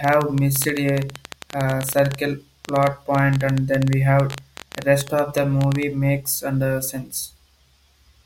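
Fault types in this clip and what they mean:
Train of clicks: a run of similar short pulses riding over the speech from 0.04 s to 5.84 s, ending just before "makes under", at about 11.6 clicks per second but unevenly spaced, some seventy in all and peaking roughly 10 dB above the speech. The ticking carries straight through the pauses, which sets it apart from isolated dropouts or codec glitches tied to the signal; interference from nearby equipment or a faulty connection or power supply is the likely cause.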